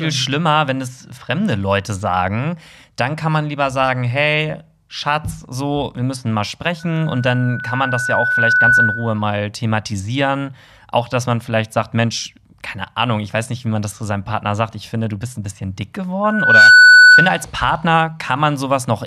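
A microphone is picking up the loudspeaker it feeds, and at 1.5 kHz the loop gain rises above one, so that frequency reinforces itself: a loudspeaker feedback squeal. The first runs from 6.79 to 9.23 s, just after "so wir müssen mal", swelling over about two seconds to roughly 10 dB above the speech. The second, from 16.24 to 17.45 s after "bist ein bisschen dick", builds in under half a second and reaches roughly 15 dB above the speech.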